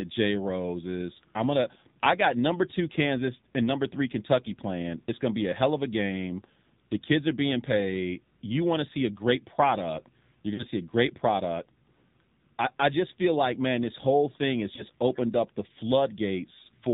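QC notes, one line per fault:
Throughout: AMR narrowband mobile codec. Nothing above 4 kHz survives, and the plainly buzzy, synthetic texture points to a low mode near 7.4 kbps.
10.54–10.64 s and 14.76–14.84 s: lost AMR speech frames. The decoder repeats its last good frame at falling gain, giving a brief smeared dip. The first dip comes before "see a great product" and fits two dropped 20 ms frames. The second falls between "this whole thing has" and "opened up the" and fits one.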